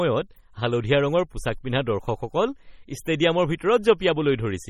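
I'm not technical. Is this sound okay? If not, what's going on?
No. MP3 compression is heard throughout the speech, and heavy squeezing is the likely cause. The encoder keeps only the parts it judges audible, so quieter details flicker in and out. That leaves a watery, swirly texture, metallic chirps on s sounds, and blurred word starts.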